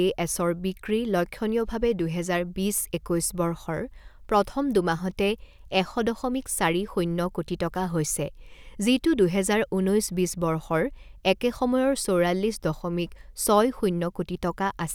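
No technical faults can be heard at any point in the speech.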